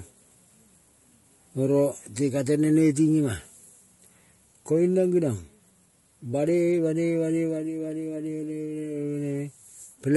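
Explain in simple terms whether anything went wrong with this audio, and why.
Throughout the speech, the voice sounds rough and grainy, with a thin, artificial top end. That's likely low-delay AAC compression; its very short frames blur pitch, unlike ordinary compression's watery swirl.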